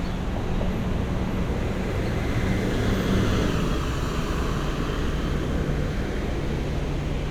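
Listening closely to this recording of everyday sounds, nothing stood out as a technical problem at any point.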